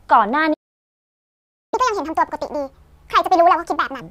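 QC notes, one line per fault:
0.53–1.74 s, playback stall: the speech cuts out mid-flow for about 1.19 s of silence, likely the player running out of data or its thread getting blocked.
1.74–4.01 s, catch-up at higher speed: the player resamples its backlog to play at 1.5x, so the speech rushes and jumps up roughly seven semitones in pitch to recover the lost time.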